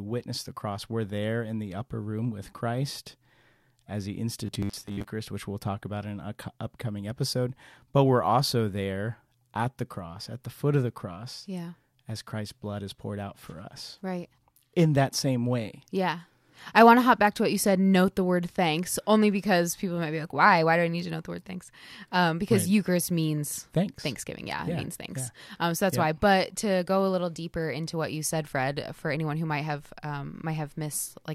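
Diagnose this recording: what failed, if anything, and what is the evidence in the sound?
Robotic sound from repeated short buffers appears from 4.47 to 5.11 s, between "as he" and "which we'll talk about". The speech turns into a rigid metallic buzz near 100 Hz that still loosely tracks the words, with roughly half the audio in that span replaced by repeats. The fault is likely at the driver or buffer stage: audio arrived too seldom, so a short block, which fits about 10 ms, was replayed to fill each gap while real audio was dropped.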